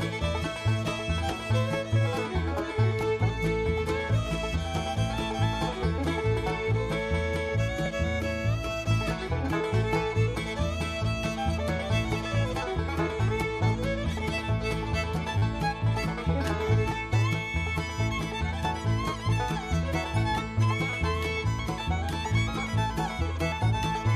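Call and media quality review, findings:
Repeated buffer, 7.86 s: single click. Playback buffer underrun, likely in the output device path; the last block, consistent with a 10 ms buffer, was replayed once with a hard join. Essentially no audio dropped.

Repeated buffer, 15.38–15.42 s: brief buzz. Same 10 ms block played four extra times, forming a 100 Hz repetition. Delivery stalled again, and the renderer looped the stale block instead of inserting silence. Little or no audio lost.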